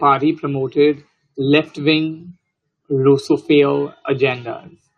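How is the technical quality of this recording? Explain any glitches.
No technical faults can be heard anywhere in the recording, so there are no glitches to explain.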